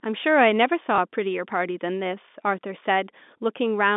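At 0.96 to 0.98 s, one 20 ms packet was lost and the receiver repeated the last packet, producing a small blip in the speech.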